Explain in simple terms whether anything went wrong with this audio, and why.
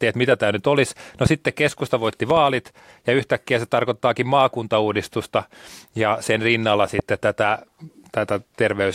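Loud pops hit at 1.26 to 1.29 s, 2.30 to 2.39 s (a double pop), and 6.99 to 7.02 s. The speech continues underneath. The likely cause is a sudden electrical jolt, such as a plug or switch.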